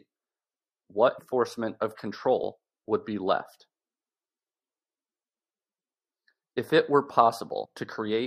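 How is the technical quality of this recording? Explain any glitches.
The recording has two dropouts where compressed frames were skipped: at 1.18 to 1.20 s, and at 7.64 s. Each time, whole frames never played, so the speech jumps ahead, by roughly 150 ms and then roughly 70 ms. A waveform shows an abrupt change in envelope, and a spectrogram shows a short vertical break in the harmonic pattern.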